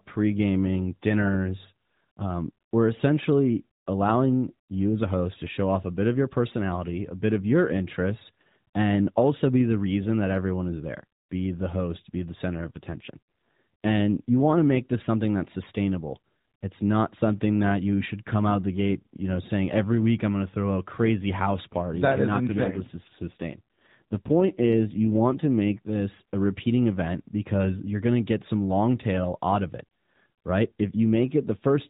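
The link twice forces an AMR rate drop, fitting a fall from 12.2 to 5.9 kbps, with bits going to error protection. From 12.48 to 14.64 s, after "the host be the", and from 22.38 to 25.96 s, before "a repeating event because", the narrowband speech keeps its band without gaps but turns rougher and more synthetic.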